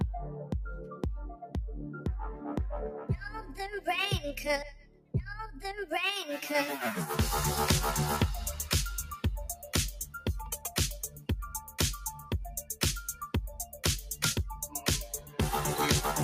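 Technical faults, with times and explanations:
throughout: noise suppressor applied to music or sounds. A suppressor tuned for speech stays active across the whole clip and treats sustained tones, ambience and reverberant tails as noise to be removed. Its gain rises and falls by around 10 dB as it decides what is wanted, so sharp onsets pass while anything held or decaying is pulled down, giving an unsteady, pumping level and a thinned-out body to the sound.
1.34–1.57 s, 4.77–5.15 s, 9.53–9.72 s, 10.05–10.71 s, 11.02–11.78 s, 12.11–12.76 s, 13.07–13.84 s, 14.52–15.38 s: sound cut by the noise suppressor. In each span the suppressor mistakes the sound itself for noise and attenuates it beyond its general swing, by about 11 to 16 dB, deepest near 4.8 to 5.2 s. The dips last from a fifth to half a second, so sustains sink and decays end abruptly, and the later spans come close together, making the level flutter.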